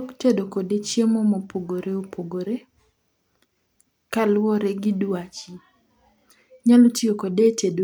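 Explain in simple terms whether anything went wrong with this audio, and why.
Nothing went wrong: the speech runs steady and unbroken, with no audible fault at any point.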